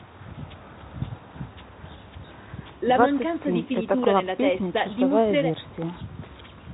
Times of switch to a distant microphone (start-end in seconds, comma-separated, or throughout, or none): none